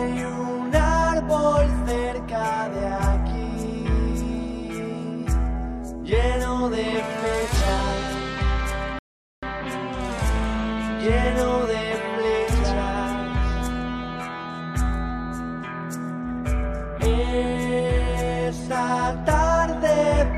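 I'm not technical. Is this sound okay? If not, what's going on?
No. At 8.99 s the sound stops for 0.44 s, then resumes exactly where it left off. This is a rebuffering stall: playback waited for more audio to download.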